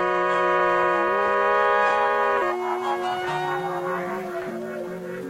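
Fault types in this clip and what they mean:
Damaged data in a compressed stream: corrupted bytes knock the decoder out of sync, so the music gets two short glitches, about 50 ms and 57 ms long, near 2.37 s and 4.46 s.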